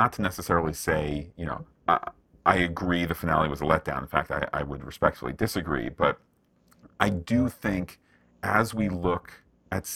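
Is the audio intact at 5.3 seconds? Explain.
No. At 5.3 seconds the speech carries overlap-add ripple, as it does throughout. Windowed frames were rejoined with an overlap that doesn't sum evenly. The level dips by about 11 dB once per frame, around 300 times a second. This gives a metallic buzz with extra tones around each note.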